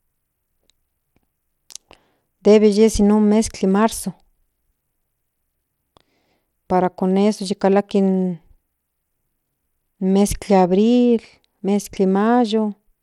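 All the way through, the speech has a gritty, plainly audible codec grain, with the treble flickering and nothing above 18.5 kHz, likely Bluetooth SBC compression at a low bit pool, which fits roughly 96 kbps, starving the top sub-bands and coarsely quantising the rest.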